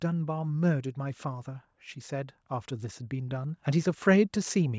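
From 0.72 s to 4.74 s the automatic gain rising is audible. The gain control judged the input too quiet and ramped its gain up by about 7 dB, so the speech and background noise swell together across those four seconds, with the band stopping at the call path's 8 kHz limit.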